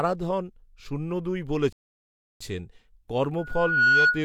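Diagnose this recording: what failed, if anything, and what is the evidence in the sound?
Right after "শূন্য দুই" the speech cuts to silence from 1.73 to 2.41 s, about 0.68 s, then resumes. This is a playback stall, likely the player's buffer running dry or its thread being blocked. The waveform shows a flat gap, and the spectrogram a blank column.

From 3.38 s to the end at 4.24 s, a loudspeaker feedback squeal rises at 1.4 kHz. Over roughly half a second it swells to about 10 dB above the speech as the microphone-to-speaker loop exceeds unity gain there. A spectrogram shows a single brightening horizontal line.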